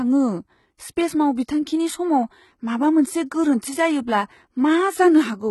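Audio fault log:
Throughout: HE-AAC compression. The treble is synthetic, copied upward from lower bands and shaped only coarsely, so sibilants sound gritty and metallic, harmonics fail to line up across the crossover, and nothing reaches above 11.8 kHz. The heavy damage fits a very low bitrate of about 16 kbps, likely from an HE-AAC v2 encode.
1.36 s: pre-echo. A brief hiss, about 17 ms long, comes just ahead of a sharp onset and softens it. The codec has spread quantisation noise sized for the loud attack across its whole block, so the noise fills the quiet moment before the attack.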